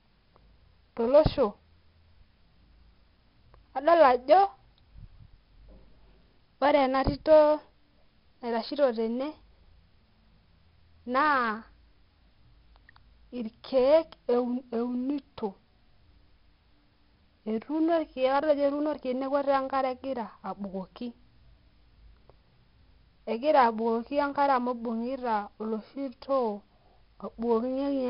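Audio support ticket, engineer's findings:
4-bit ADPCM compression across the entire clip. Encoder codes each sample as a coarse 4-bit step off a prediction; step size lags on fast changes. Heavy codec damage: gritty hiss riding the speech level, rougher on loud syllables, smearing and distortion on sharp onsets. Nothing above 5.3 kHz, pointing to a low sample rate near 11 kHz, so muffled top end. Data rate consistent with about 44 kbps.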